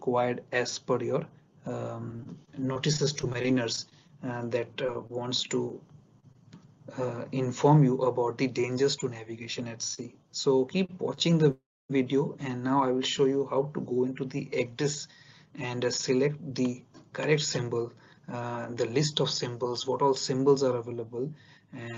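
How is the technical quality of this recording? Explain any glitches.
The recording has clear network-related faults: choppy and hiccuping passages, two hurried stretches, several brief held sounds, and one short dropout. Its top end stops near 8 kHz, which fits a call codec such as Opus at around 24 kbps.

From 2.11 to 4.11 s the sound turns choppy, with fragments missing. This is repeated packet loss: 14 holes, the longest 23 ms, about 180 ms lost in total. Each hole was patched by extending the previous sound, so about 11% of that stretch is filler.

Between 4.87 and 6.69 s there are brief ticks and smears but the audio stays mostly clear. These are scattered short gaps, roughly seven, the longest around 30 ms. About 80 ms went missing, each piece covered by continuing the last sound.

From 8.67 to 9.30 s the sound runs noticeably quicker at unchanged pitch. This is a jitter buffer speed-up to 107%. 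The receiver trimmed roughly 50 ms in tiny pitch-period slices to shrink excess buffered delay.

At 9.94 to 10.14 s, 10.85 to 10.91 s and 11.15 to 11.19 s a sound hangs slightly too long. Each is a short stall from a late packet. The buffer ran dry, and 34, 34 and 22 ms were stretched while waiting. Nothing is lost.

From 11.51 to 11.91 s the audio fades into about 280 ms of silence, then resumes where it left off. This is a call audio freeze, likely caused by packets held up in transit emptying the jitter buffer.

From 15.17 to 18.27 s the sound is hurried again, another jitter buffer speed-up, here to 110%. It removes around 300 ms.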